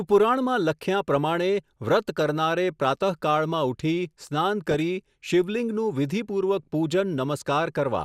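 At 4.71 s, for just under a tenth of a second until 4.80 s, the speech breaks into DAB burbling: a brief wet, bubbling burble laid over the voice. Weak reception let bit errors slip past error correction into the MP2 stream, so corrupted samples put short blips of noise into single sub-bands and corrupted scale factors made sub-bands leap in level. The span fits a handful of damaged frames. Unlike a dropout, the audio never goes silent; it churns.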